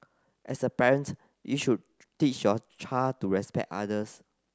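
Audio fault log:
There is no fault in this speech clip.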